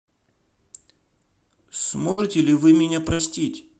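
Two bursts of packet loss, at 2.11 to 2.20 s and 3.13 to 3.22 s, made the receiver stretch the last sound, so speech fades out, then jumps ahead 60 ms.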